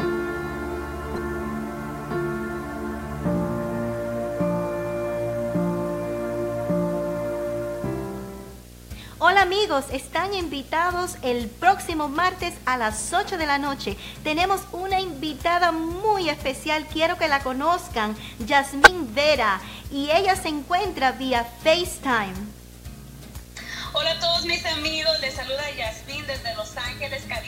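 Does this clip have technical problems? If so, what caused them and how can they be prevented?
Yes. A screen or video cable is coupling into the audio path, producing video or display buzz through the whole clip: a 60 Hz field-rate buzz with hash above it, sitting roughly 20 dB below the wanted sound. Keeping audio cables away from displays and video leads, and using balanced, properly grounded connections, would prevent it.

From 18.82 to 18.88 s, part of the compressed stream holds damaged data. The decoder misreads the corrupted frames, loses sync and hunts for the next valid frame header, so a brief chirp or blip cuts into the sound. Verifying files after transfer and using error-checked storage or transport would prevent it.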